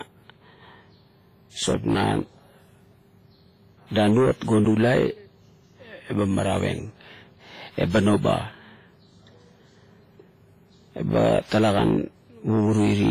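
Throughout the speech there is heavy transform-codec damage, likely from WMA compression at a low bitrate around 24 kbps: quantisation noise smeared over long blocks gives a ringing, washy hiss that swells and fades with the signal, and nothing remains above 15.5 kHz. Unlike broadband noise, this hiss tracks the speech rather than sitting steadily underneath it.

At 4.65 s a block of digital silence drops the audio out for about 11 ms, which fits a 512-sample buffer left unfilled. The signal stops and restarts with no fade, so the gap is too short to hear as a hole and comes across as a tick or dip.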